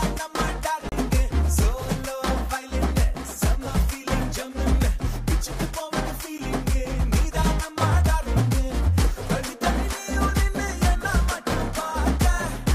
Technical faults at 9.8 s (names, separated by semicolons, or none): none